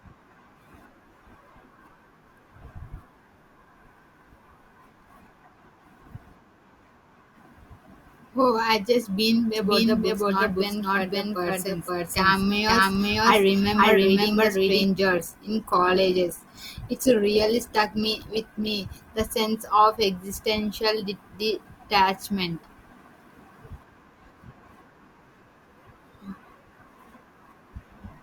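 A doubled audio track runs from 9.56 to 14.84 s in this speech recording, right after "I just been": a second full-band copy at roughly the same level trails about half a second behind, dry and without room colour, cutting in and out abruptly, likely from the audio being captured twice or an edit holding two copies out of step. An adaptive stream at a lower bitrate follows from 15.10 to 19.10 s, ending just before "the sense of": the quality suddenly drops with heavier codec artefacts, with no gap, which points to the stream dropping from a 64 kbit/s Opus version to a 16 kbit/s one while the connection slowed.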